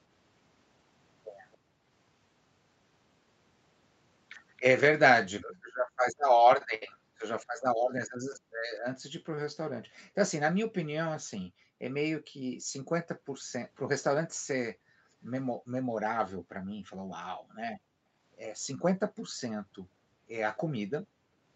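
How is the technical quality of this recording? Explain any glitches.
The recording has two recurring call-processing faults, heard within a band that stops at about 8 kHz.

Echo leak at 1.52–1.58 s and 4.57–5.59 s: a very faint copy of the speech returns 276 ms late. This is likely loudspeaker sound the far end's echo canceller failed to remove.

Background gated by the echo canceller at 1.58–1.86 s, 5.59–9.93 s, 11.44–18.16 s and 19.07–21.45 s: the canceller clamps the microphone, so room sound dips by up to about 40 dB and then returns.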